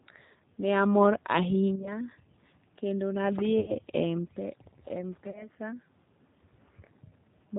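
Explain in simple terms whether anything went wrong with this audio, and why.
Throughout, the speech has the thin, slightly rough, synthetic quality of the G.729 codec, which rebuilds the voice from a simple model and drops everything above 4 kHz. Unlike ordinary muffling, it sounds artificial, not just dull.

There is also VoIP packet loss concealed by the speech codec at 1.76–1.93, 3.60–3.75 and 5.31–5.48 s. At these moments the decoder filled the gaps by stretching the last sound into a buzzy tone or coloured noise that fades, rather than leaving silence or clicks.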